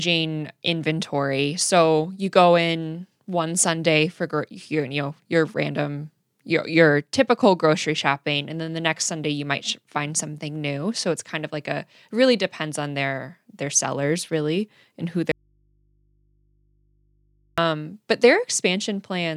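An audio dropout to a faint residue runs from 15.32 to 17.58 s, just after "sellers really and who". The speech is lost abruptly for about 2.26 s while the path stays live, leaving only a low mains hum far below the speech. The likely cause is a signal break upstream.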